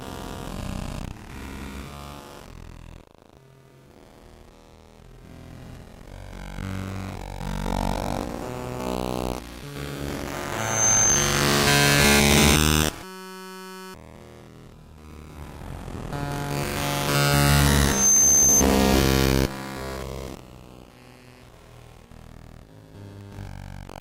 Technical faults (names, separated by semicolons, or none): loudspeaker feedback squeal; system hang loop